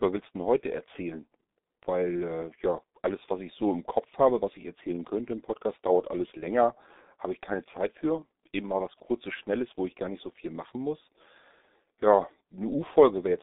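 From start to finish the speech carries the sound of the G.723.1 codec, and the damage is heavy. Nothing gets through above about 3.8 kHz, and the band sits roughly between 200 Hz and 3.7 kHz, so it's muffled and boxed in. The hoarse, smeared quality and the blurred consonants fit a coder working at around 6 kbit/s in 30 ms chunks, where the voice model can't keep up with quick changes.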